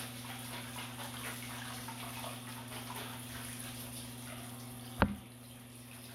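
Nothing here points to a technical fault; the sound just carries on from its first moment to its last without anything going wrong along the way.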